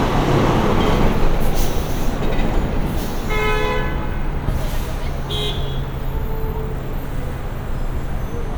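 No technical faults can be heard anywhere in this recording of sounds.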